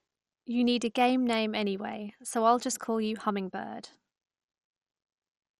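Throughout, the speech sounds dull and gurgling, with granular distortion and nothing above 13.1 kHz, likely MP2 compression at a low rate, around 56 kbps.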